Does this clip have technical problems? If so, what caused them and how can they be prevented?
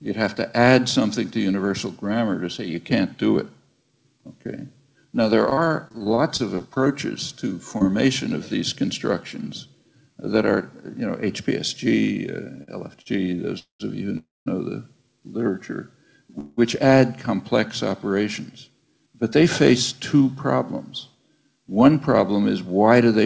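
Yes. From 5.50 to 7.84 s there is repeated packet loss, heard as choppy, robotic sound: 15 short holes, the longest 35 ms, are each bridged by stretching the previous sound, yet about 220 ms of audio is actually gone. Unlike a stutter, pieces are missing here, so the sound skips forward rather than merely dragging. Preventing it means cutting loss on the network path, for example with a wired connection, plus forward error correction or redundancy in the call settings.

Between 12.56 and 13.08 s come repeated stalls, a stutter made of three brief hangs (the longest 45 ms, about 95 ms in all) where the last sound is held while the jitter buffer waits for late packets. Nothing is lost, which separates it from the robotic stretch above: the audio hesitates and then carries on intact. A steadier connection, or a jitter buffer that keeps a slightly larger reserve, prevents this.

From 13.24 to 15.04 s a jitter buffer slow-down plays the audio at about 98% speed, adding roughly 45 ms by repeating single pitch periods to rebuild the buffer's reserve. 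The pitch stays the same, so unlike a tape-speed error it sounds only slightly drawn out, with no drop in tone. Keeping packet delivery even, so the buffer never runs low, avoids the need for this stretching.

Three call audio freezes follow. At 13.59 to 13.82 s the last sound is held and fades for about 0.2 s, including roughly 130 ms of silence. At 14.18 to 14.48 s a similar hold lasts about 0.29 s, 200 ms of it silent. At 16.39 to 16.59 s there is a hold of about 0.18 s that fades without reaching silence. Each time, playback resumes exactly where it stopped, so a pause is inserted but nothing is skipped, which distinguishes these freezes from packet loss. The likely cause is packets held up in transit until the buffer emptied. A more stable network route and adequate buffer depth prevent this.

From 18.49 to 21.30 s a jitter buffer speed-up plays the audio at about 106% speed, cutting out pitch-period slices totalling around 150 ms to drain excess delay held in the buffer. 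The pitch stays unchanged, so the sound seems hurried rather than higher in tone. Avoiding bursts of delayed packets, which are what push the buffer over its target, prevents it.

Throughout the clip the call codec passes nothing above 8 kHz, which fits G.722 wideband coding.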